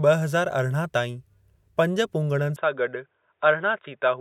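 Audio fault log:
2.56 to 4.21 s, input switched to a poorer device: the speech abruptly turns dull and boxy, with nothing above 3.8 kHz, and it stays that way to the end of the clip. There is no gap at the change, the loudness stays about the same, and a very faint new background noise appears far below the speech. The likely cause is the recording input jumping to a narrower-band microphone or a headset's call mode, which has its own tone and noise.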